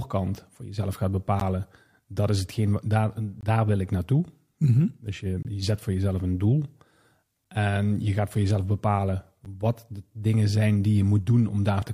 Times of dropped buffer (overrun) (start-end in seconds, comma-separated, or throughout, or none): none